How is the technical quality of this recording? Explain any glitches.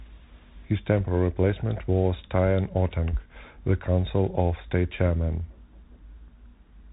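Technical quality is poor, limited by a Bluetooth CVSD headset codec throughout the speech. CVSD encodes one bit per sample, each saying only up or down, with a step size that adapts, and here the sound fits a 64 kbps link. Nothing passes above 3.8 kHz, so a spectrogram shows a hard ceiling there. The damage is plainly audible: s sounds turn scratchy, and a granular hiss sits under the speech, filling the gaps as a grainy noise floor.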